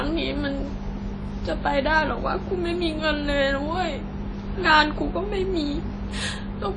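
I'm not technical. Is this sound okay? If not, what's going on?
No, not quite. All the way through this speech there's a smeary, ringing quality, with a hiss that swells and fades along with the sound. That's most likely WMA compression, a file format that shrinks audio by throwing away detail it thinks you won't miss. Here it has thrown away clearly too much. Everything above about 10 kHz is gone, so the top end sounds dull, and the leftover detail smears into a washy blur.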